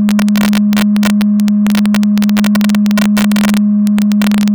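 Integer overflow runs through this music clip: loud peaks that exceed the largest integer wrap to the opposite sign instead of being limited, with roughly half a percent of samples affected. Each wrap jumps across the full range, producing violent cracks on loud moments, sharper than clipping.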